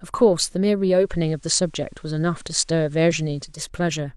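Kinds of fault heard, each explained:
Digital radio blending to analogue: The receiver lost the digital stream and cross-faded over 318 ms to the station's FM broadcast, then back. From 0.89 to 3.69 s, faint hiss sits well below the speech, and level shifts about 1 dB.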